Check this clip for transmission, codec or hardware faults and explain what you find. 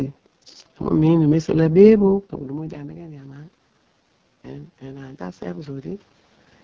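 Two faults are audible: heavy wideband codec damage throughout, and two stretches where automatic gain control slowly pushes the level up.

Throughout the clip the speech has been carried by the AMR wideband (HD Voice) codec at its lowest rate, which points to 6.6 kbit/s. At that rate the pulse-driven vocal tract model has too few bits to follow the speech closely, so the excitation is coarse and the top band above 6.4 kHz is only shaped noise. The result here is heavy damage: the speech sounds rough and raspy.

The automatic gain rising fault occurs twice, from 2.54 to 3.61 s and from 4.8 to 6.11 s. Each time the input dropped by about 18 dB, the first time after the talker moved away from the microphone around 2 s. The gain control treated this as a quiet input and raised its gain over roughly a second, by about 4 dB the first time and about 5 dB the second. The voice and the room noise swell together, a gradual pumping rather than a sudden jump.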